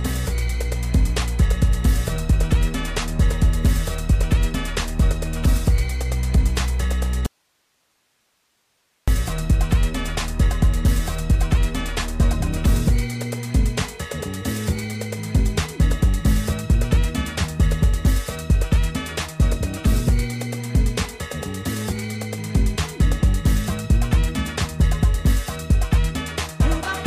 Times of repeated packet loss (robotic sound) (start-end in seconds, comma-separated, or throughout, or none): none